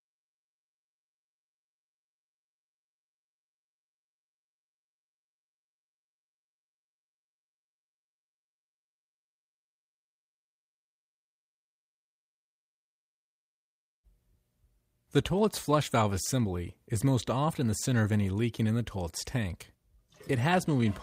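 No dropouts, distortion, timing errors or other technical faults can be heard anywhere in the audio.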